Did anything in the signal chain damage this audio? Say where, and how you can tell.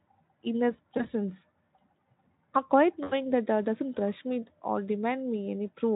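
Yes, at the network stage: VoIP packet loss concealed by the speech codec. At 0.97 to 1.08 s a single 20 ms gap is bridged, and at 3.04 to 3.14 s, just after "a quiet", about 80 ms is bridged. In each, the decoder stretches its last pitch and filter into a buzzy tone or coloured noise that fades, and the voice stays weak or distorted for tens of milliseconds afterward. A dropout or gate would give silence instead. The Speex coding itself adds little audible damage.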